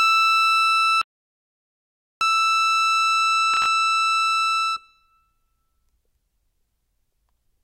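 Audio dropout to silence from 1.02 to 2.21 s: the music stops abruptly and resumes about 1.2 s later, and the gap between is silent with no background or room tone at all. That dead-flat gap suggests the input signal vanished while recording carried on writing zeros, likely from a momentary disconnection, a failed link or a stray mute upstream. Whatever the music did during that stretch is simply missing.

Processor overload crackle from 3.54 to 3.66 s: a short burst of gritty crackle rides over the music for roughly a tenth of a second and then clears. The audio engine fell behind and missed a handful of buffer deadlines, each on the order of a few milliseconds. Every missed buffer became a tiny hard-edged silent hole, and packed this closely together they merge into a brief tearing texture.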